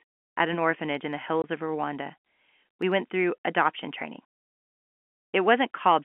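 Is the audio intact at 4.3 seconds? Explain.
Yes, the audio is intact at 4.3 seconds, with nothing there beyond the narrow telephone band of the G.711 line it travels over.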